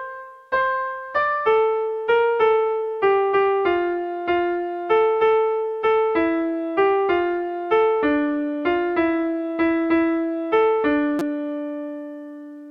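At 11.19 to 11.22 s a repeated buffer occurs: new audio arrived late, so the device replayed a piece of about 5.8 ms, which fits a 256-sample buffer, four times with hard joins. It sounds like a brief buzz rather than a gap, since nothing appears lost.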